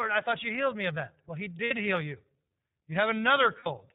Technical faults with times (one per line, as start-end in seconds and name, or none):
0.00-3.95 iLBC codec
1.64-1.72 lost iLBC frames
3.59-3.67 lost iLBC frames